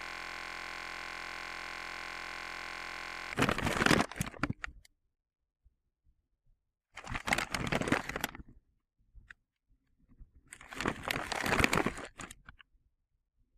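Right from the start and running until 3.32 s, the clip is stuck in a system hang loop: something froze while the audio hardware kept replaying the same ring buffer. It's already under way when the clip opens. A 23.22 ms slice of sound repeats about 140 times, so you hear a steady buzz at 43.1 Hz instead of the actual sound. That loop length fits a 1024-sample buffer.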